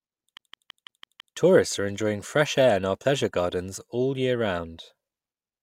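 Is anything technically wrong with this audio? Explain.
Yes. From 0.37 to 1.37 s, a 0.17 s fragment stutters six times with tiny mutes: a CD stuck on one turn, its laser knocked back by a scratch.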